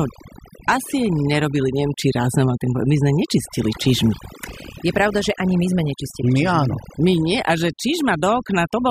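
Right from the start and all the way through, the speech has overdone noise removal. A denoiser was pushed too hard on a noisy take, so any frequency band sitting close to its noise estimate gets pulled way down or shut off, and the softer parts of the voice get dragged out with the noise. You hear it as a background gone almost dead, sprinkled with little twinkly specks.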